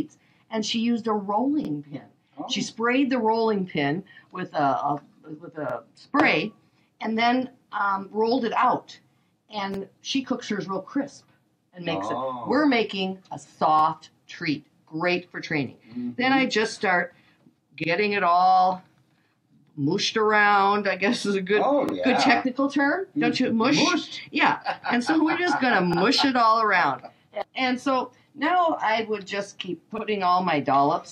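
A brief click-like stutter returns at 1.65, 5.70, 9.74, 13.79, 17.84, 21.89, 25.93 and 29.98 s, each lasting 48 ms. These are overlapping chunks: the audio was handled in 4 s blocks, each beginning 48 ms before the previous one ended, so that sliver plays twice at every join.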